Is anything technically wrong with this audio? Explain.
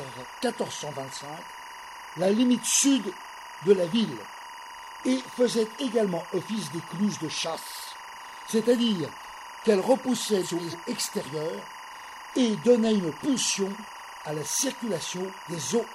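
Yes, there are two problems. The first is timecode bleed, present throughout. Linear timecode running at 24 frames per second has leaked in from an adjacent track or cable. Its square wave flips between roughly 1 kHz and 2 kHz, sitting around 15 dB below the sound as a steady chirping warble. Because that pitch alternation keeps a regular rhythm, it can't be mistaken for a constant hum or whine.

The second is frames out of order, at 10.43–10.75 s and 13.74–13.86 s. In each stretch, two adjacent blocks of coded audio were decoded in swapped order. The blocks last about 139 ms and 46 ms, which fits codec frames of about 46 ms. The result is a garbled flutter. Unlike a dropout or skip, nothing goes missing and the timing stays intact.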